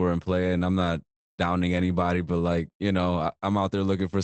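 At 0.79 to 0.85 s and 1.77 to 1.83 s, just before "but like you know", lost packets were rebuilt from error correction. Each rebuilt stretch sounds briefly rougher and noisier for about 40 ms, which fits two lost packets replaced by low-bitrate copies.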